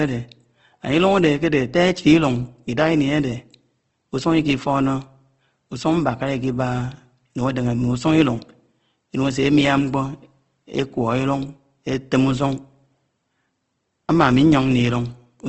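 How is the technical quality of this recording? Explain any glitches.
The technical quality is noticeably degraded by plainly audible lossy compression across the whole speech recording. Throughout, the sound is rough and grainy, with nothing above 8.2 kHz. This is likely Opus compression in its CELT mode at a low rate, roughly 16 kbps. The encoder keeps each band's energy but fills starved bands with noise or folded copies. On a spectrogram the content stops sharply at 8.2 kHz, with speckled, noisy texture below.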